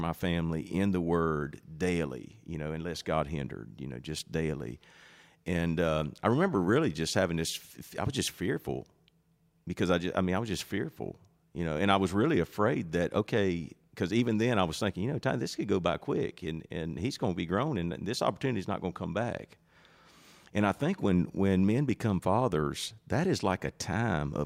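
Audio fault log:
Nothing to log here, as no faults turn up anywhere in this recording.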